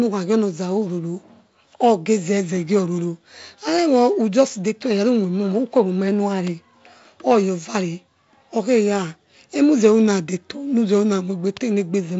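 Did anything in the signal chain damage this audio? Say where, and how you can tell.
No, nothing in this speech recording stood out as damage from any stage of the chain on listening.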